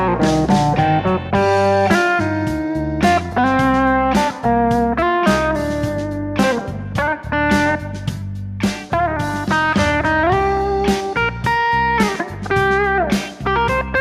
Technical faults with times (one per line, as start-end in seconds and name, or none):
none